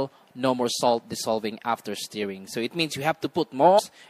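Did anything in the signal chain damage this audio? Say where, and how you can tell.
Yes. At the codec stage, likely MP3 compression at a low bitrate of about 64 kbps, the whole clip sounds dulled and watery, with swirling, unstable high frequencies.

In the storage or network stage, damaged data in the compressed stream at 3.75 to 3.80 s makes the decoder misread frames and resync, producing a brief glitch.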